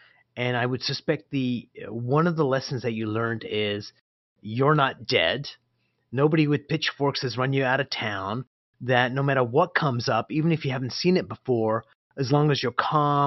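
Speech recording with no technical faults to report.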